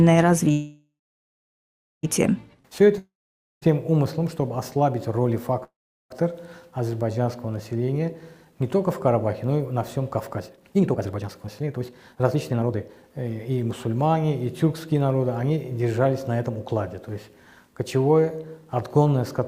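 From 0.51 to 2.05 s a call audio freeze holds the last sound as a fading buzz, then about 1.1 s of silence, likely from delayed packets draining the jitter buffer. The audio resumes where it stopped, with nothing skipped.

From 2.98 to 3.64 s a long network dropout sounds similar, fading into about 0.52 s of silence. Unlike the freeze, about 0.64 s of audio is likely lost, so it resumes further on.

A second call audio freeze at 5.64–6.12 s fades into about 0.38 s of silence before picking up intact.

From 7.76 to 15.80 s a jitter buffer speed-up plays the audio at 125% speed with unchanged pitch, trimming roughly 2 s of backlog. It sounds hurried rather than gapped.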